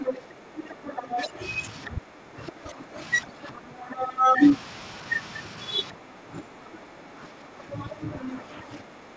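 From 0.0 to 4.4 s, the speech dips by as much as about 10 dB. This is speech suppressed in double talk, likely because the echo canceller turned both voices down. Over the same stretch, to 4.49 s, the other side's voice leaks through at roughly speech level, likely from incomplete echo removal. From 5.92 s to the end the suppression returns, again about 10 dB deep. Between 7.74 and 8.78 s the leaked voice reappears, about 10 dB below the speech.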